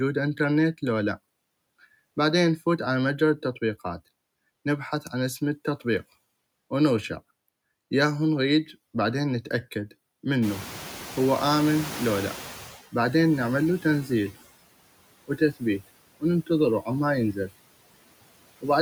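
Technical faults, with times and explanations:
Throughout: noise suppressor artifacts. The suppressor pulls down bands it judges to be steady noise, about 20 dB, frame by frame, so the background dips between phrases and swells beneath them.
10.42–12.82 s: noise suppressor catching up. Room noise jumps by about 20 dB near 10.5 s, ending up about 17 dB under the speech. The suppressor's noise estimate trails this rise over 2.4 s, so the louder background passes through with only about 13 dB of cut at first, then sinks.
15.28–15.62 s: speech cut by the noise suppressor. Within this stretch a brief portion of speech, around a tenth of a second in total, is treated as noise and pulled down by as much as about 17 dB. That portion sounds swallowed and faint.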